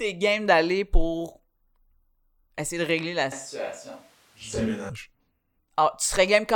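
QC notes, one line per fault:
3.32 to 4.89 s, switch to a distant microphone: the speech abruptly turns roomy and hollow, thin in the bass, roughly 10 dB quieter, with room noise sitting only about 30 dB under it. Likely the close mic dropped out and a far one covered, then it snaps back.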